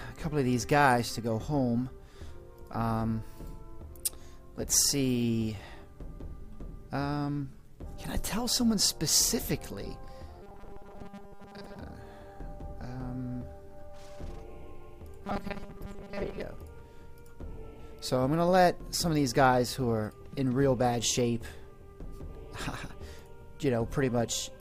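From 10.42 to 11.79 s and again from 15.26 to 16.42 s, the sound turns into a rigid 200 Hz buzz, likely robotic sound from repeated short buffers: a 5 ms slice replayed to cover most of the gap. Unlike jitter, that buzz pitch stays fixed.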